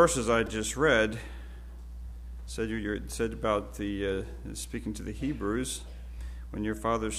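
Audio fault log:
0.46 s, repeated buffer: a tiny slice of about 2.9 ms plays four extra times back to back, which fits a 128-sample buffer being replayed while fresh audio ran late. The repeats are so short that they come across as a quick click or brief buzz rather than a stutter, and no audio seems to go missing.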